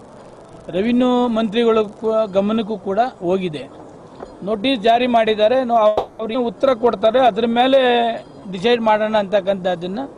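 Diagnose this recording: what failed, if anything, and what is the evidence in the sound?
Call audio freeze, 5.87 to 6.21 s, at the network and jitter-buffer stage. For 320 ms the last sound is stretched into a fading buzz, and then the audio resumes exactly where it stopped with nothing lost. Packets were likely held up in transit, emptying the buffer and forcing concealment.

Skip ahead, 6.33 to 6.36 s, also at the jitter buffer. Playback jumps forward with only a 10 ms bridge, and about a fifth of a second of audio is missing. This points to a stretch of audio lost in transit or discarded by the buffer while later audio was already waiting.

Jitter buffer slow-down, 6.71 to 8.71 s. The audio runs at 91% speed with unchanged pitch, so sounds are audibly drawn out. The receiver repeated individual pitch periods and pause fragments, inserting 184 ms in total, to rebuild its reserve.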